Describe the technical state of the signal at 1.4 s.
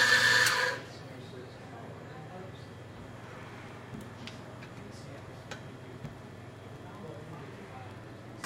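At 1.4 s the signal is intact, with no dropout, clipping, glitch or other technical fault audible at that point.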